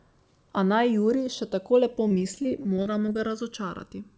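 A slow flanging sweeps through the whole clip as the channels drift apart: the two sides run on separate clocks differing by a couple of hundred parts per million, so their offset creeps to about a millisecond. From 2.08 to 3.16 s, right after "še tako lepo", the sound turns choppy and robotic. This is repeated packet loss: about 200 ms went missing in short holes of up to 30 ms, each patched by stretching the preceding sound. Overlapping it, from 2.47 to 3.33 s, the audio drags at unchanged pitch to 94% speed. This jitter buffer slow-down came from repeating pitch periods to add 56 ms of reserve. Nothing is heard above 8 kHz, which fits the G.722 call path.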